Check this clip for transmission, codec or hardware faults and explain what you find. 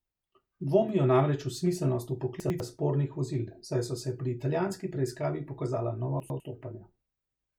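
There's one problem here, and it happens twice: chunks out of order, from 2.4 to 2.6 s and again from 6.2 to 6.4 s. In each spot a 100 ms chunk of the speech turns up one chunk late, so it plays after the piece that should follow it. Nothing goes missing, but those two chunks swap places, leaving three hard joins. You hear a quick jumbled stumble in the speech.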